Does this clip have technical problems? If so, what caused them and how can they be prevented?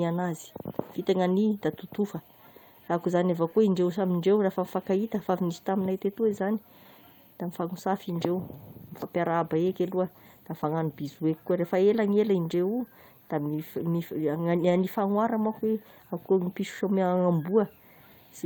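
Yes: lost packets rebuilt from error correction, at 3.69–3.71, 5.19, 11.07–11.21, 12.51–12.53, 14.57–14.71, 15.43–15.49 and 16.41–16.47 s. The speech continues without gaps, but each 20 to 80 ms stretch turns briefly rougher and noisier. This fits the decoder playing low-bitrate redundant copies carried in the following packets. Reducing packet loss on the network path, for example with a more stable connection or less congestion, prevents this.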